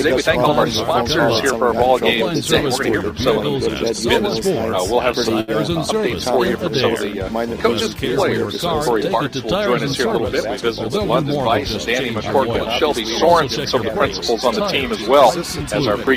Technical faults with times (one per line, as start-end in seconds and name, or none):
5.40-5.51 short stall from a late packet